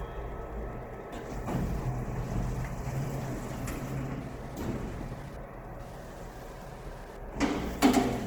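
A faint, steady ticking runs under the everyday sounds from start to finish, roughly 30 dB below them, repeating every 102.4 ms, about ten times a second. That is Wi-Fi interference: a nearby radio's beacon bursts are being rectified by the audio circuit and heard as clicks.

Throughout, the sounds also have a plainly audible grainy, rough, noisy texture, with tonal parts turned coarse rather than swirly, while the bandwidth still reaches about 20.2 kHz. That points to Opus compression in its CELT music mode as the likely cause, at a rate consistent with roughly 16 kbps, where bands are filled with folded or noise content as bits run short.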